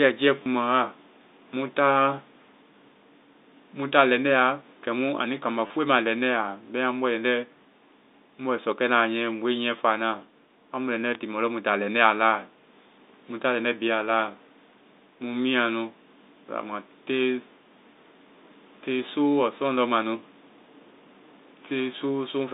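At 0.43 to 0.46 s there's the first packet loss with last packet repeated. About 30 ms of audio drops out, and the receiver keeps replaying the last chunk it got. That fits three 10 ms packets, so the repeats cycle at roughly 100 Hz. The copies don't line up with the pitch of the speech, so the run comes across as a brief robotic stutter. The same thing happens again at 5.67 to 5.70 s, with the same 30 ms length and the same buzzy catch.

In between, at 3.82 s, there's a bit error spike. One bit got flipped across three consecutive samples, so the waveform jumps by a power of two and snaps right back. You hear a single sharp broadband tick that has nothing to do with the speech around it. A second one lands at 11.15 s, just before "tiimo lɔ", and it's the same kind of three-sample jolt with the same isolated click. All of this sits inside the G.711 A-law telephone band, which runs from about 250 Hz to 3.7 kHz.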